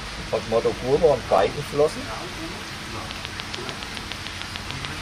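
From 1.01 to 1.93 s, a scratch or blemish on the disc wipes out more data than the player's error correction can rebuild, and this happens once per revolution. The player patches over the damaged stretch by interpolating or muting those samples. The result is CD scratch ticks: six short, evenly spaced ticks or micro-dropouts, the longest only a few milliseconds, arriving at roughly six or seven a second in step with the disc's rotation.

From 3.11 to 4.86 s, the cause is likely electrical interference from nearby equipment or a struggling interface injecting a pulse into the signal path at a steady rate. This produces a train of clicks: about fifteen near-identical pulses at a regular 6.9 per second, standing out around 20 dB above the surrounding sound. They are heard as a sharp, mechanical ticking laid over the audio.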